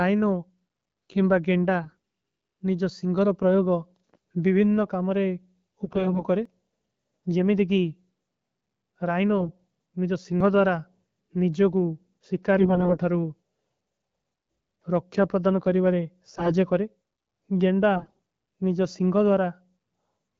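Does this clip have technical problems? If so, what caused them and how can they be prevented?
Yes. AMR bit errors make the speech hoarse and gargly at 1.84–1.97 s (after "କେମବା ଗେଂଡା"), 5.85–6.25, 9.38–9.52, 12.59–12.98, 16.33–16.53 (after "ରକ୍ଯା ପ୍ରଦନ କରୀବାରେ") and 17.95–18.20 s. Corrupted low-priority bits, up to around 15 percent, misplace pulses and distort pitch, gain and spectrum values. Stronger radio coverage or better channel coding prevents this.

Short skips at 6.45 s and 10.40 s (after "ରାଈନୋ ନିଜଵ") each drop about 50 ms. The likely cause is audio missing between chunks, since the recorder loses samples when it switches between 4-second blocks. Continuous buffering across chunk boundaries prevents it.

The AMR-WB codec at 12.65 kbit/s contributes only light coloration.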